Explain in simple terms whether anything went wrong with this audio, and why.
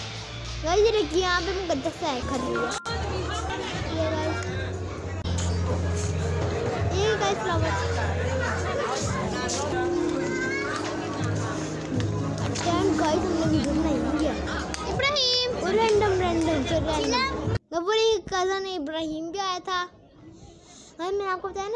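Nothing went wrong with this audio that a listener would notice. There are no dropouts, glitches or other interruptions at any point in the recording.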